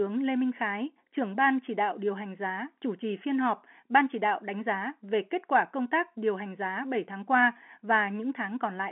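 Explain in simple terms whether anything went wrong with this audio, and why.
Nothing went wrong with this audio. The speech has the narrow sound of an ordinary landline call because G.711 telephone coding lets nothing through above about 3.8 kHz, which is how a working phone line is meant to sound.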